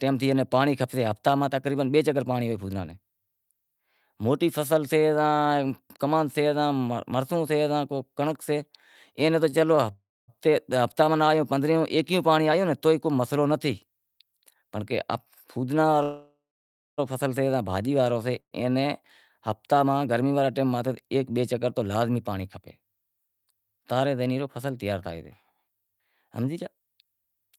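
From 9.49 to 9.84 s the speech catches three times in quick succession, each brief gap (the longest 30 ms) bridged by a prolonged fragment of the preceding sound. This repeated stalls (stutter) pattern means packets arrived late and the jitter buffer kept running dry.

At 9.92 s, 16.03 s and 18.40 s the sound hangs on a fading buzz that sinks to silence, lasting 0.36 s, 0.95 s and 0.12 s, then resumes where it left off. These call audio freezes likely come from packets held up in transit, emptying the buffer.

From 14.11 to 14.63 s and from 20.47 to 21.31 s the speech sounds hurried, about 11% and 9% fast at unchanged pitch. That is jitter buffer speed-up: the receiver trimmed tiny pitch-period slices, around 70 ms in total each time, to shed excess delay.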